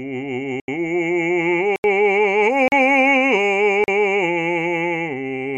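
Blocks of digital silence at 0.6 s and 1.76 s (80 ms each) and at 2.68 s and 3.84 s (40 ms each): the music drops abruptly to silence and returns unfaded, leaving short holes.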